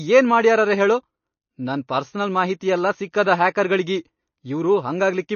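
From start to finish the speech sounds dull and watery, with nothing above 6.6 kHz and a swirling, unstable texture. That is likely MP3 compression, starved of bits in a way that fits roughly 32 kbps, so the encoder cut the treble and let weak frequency detail flicker between frames.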